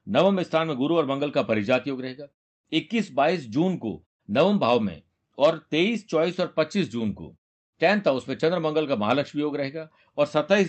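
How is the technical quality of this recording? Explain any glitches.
The recording shows no glitches, carrying the speech through a call path that holds the sound to a band of about 8 kHz and lets the background drop away in the pauses before returning with the next phrase.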